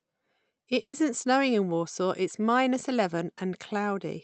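At 0.81 to 0.95 s, just before "snowing in", there is a burst of packet loss. Roughly 120 ms of audio never arrived in time, and the receiver stretched the last sound it had while fading it out, leaving a held smear that sinks toward silence. On a spectrogram the last spectrum runs flat and unchanging before dimming to near-black; the waveform shows a repeating shape shrinking in level. The call codec's band, topping out near 8 kHz, continues unchanged through the event.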